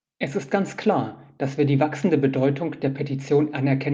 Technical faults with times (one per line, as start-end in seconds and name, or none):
none